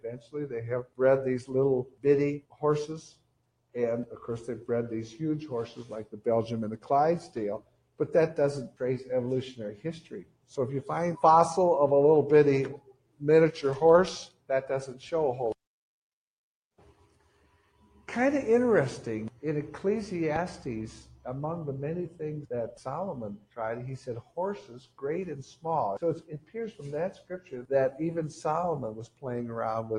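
A noise suppressor built for speech stays engaged across the whole clip and treats sustained tones, ambience and decays as noise. It pulls them down by a swing of around 10 dB, so the sound pumps and thins while sharp onsets pass through.

The suppressor cuts sound harder in five stretches: 0.0 to 3.75 s and 5.79 to 10.54 s, each with roughly a second and a half affected, and 12.77 to 15.02 s, all reaching drops of about 18 dB. It cuts again from 16.93 to 18.03 s at about 11 dB, and from 21.09 s to the end at about 17 dB. In each stretch, held sound sinks and tails are chopped short.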